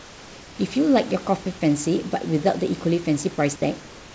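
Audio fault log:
0.00–0.59 s, comfort noise in place of the background: the sender likely halted transmission during this opening pause, so the receiver filled it with synthesised noise. The detailed room background becomes a flat, featureless hiss, about 3 dB quieter, until sound begins.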